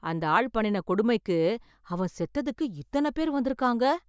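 Listening to the speech recording, nothing stood out as a technical problem at any point.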